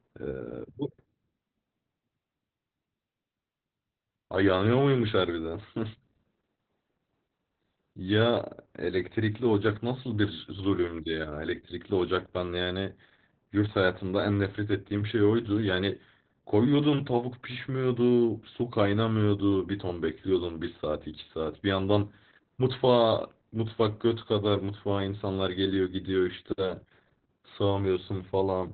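Heavy Opus voice compression runs through the whole speech clip. The sound points to the SILK coder at about 8 kbps, squeezed to narrowband. Everything above 4 kHz is gone. The excitation is coded coarsely, so speech sounds muffled, hoarse and slightly robotic.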